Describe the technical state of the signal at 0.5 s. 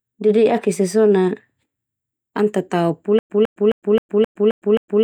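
At 0.5 s the speech signal is intact, with no audible fault at that moment.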